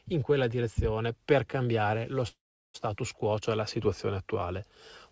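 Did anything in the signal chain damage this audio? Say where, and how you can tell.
Yes. A call audio freeze occurs from 2.28 to 2.76 s, between "direzione per cambiare lo" and "quo cioè la situazione". Packets were likely delayed on the network, emptying the jitter buffer. A brief fading tail becomes 0.37 s of silence. The audio then resumes intact, 0.46 s late.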